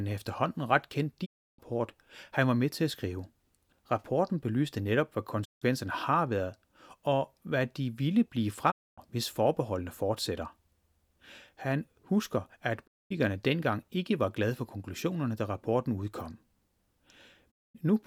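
A digital broadcast dropout recurs as the receiver loses valid frames and mutes. The speech fades out over about 20 ms into silence at 1.24, 5.44 (after "belyste netop hvad"), 8.70 (after "hvad de ville blive"), 12.86 (before "dengang ikke var glade") and 17.50 s. Each hole lasts roughly 0.2 to 0.36 s, and the missing speech never returns.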